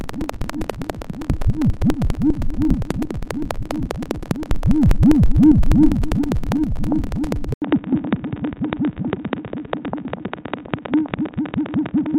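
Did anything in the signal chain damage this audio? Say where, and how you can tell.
Yes. At 7.54 s the sound cuts out for 80 ms, then continues to the end duller and a few dB quieter, with nothing above 3.8 kHz and a new, faint noise floor. This is likely an input switched to a poorer device at the driver stage, a narrower-band microphone replacing the original.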